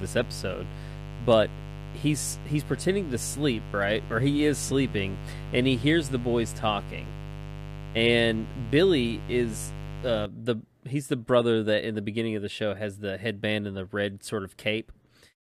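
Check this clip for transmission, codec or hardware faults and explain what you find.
A mains buzz runs through the first part of the speech, from 0.0 s until it stops at 10.26 s, just before "the he's the brother". Sharp switching spikes, from something like a dimmer or rectifier or from missing shielding, entered the signal twice per 50 Hz cycle, so the buzz carries a dense series of harmonics reaching several kHz. It sits roughly ten decibels below the speech and sounds steady and raspy. That bright, edgy texture sets it apart from a plain hum, which stays smooth and low.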